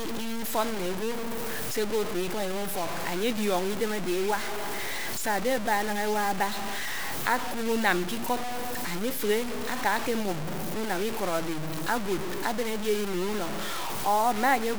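From start to finish the speech carries a coarse, grainy distortion that rises and falls with the signal, which points to low bit depth without dither. The likely cause is a requantisation to about 5 bits by truncation, so each sample is cut down to the next step below it and the error tracks the waveform rather than forming a steady hiss. The grit sits only a little below the speech itself, quiet passages turn rough, and the softest parts sputter or fall to silence.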